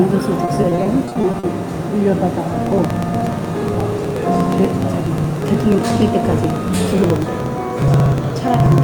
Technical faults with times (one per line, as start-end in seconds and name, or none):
0.45-1.45 repeated packet loss (robotic sound)
2.54-8.78 periodic USB or driver dropouts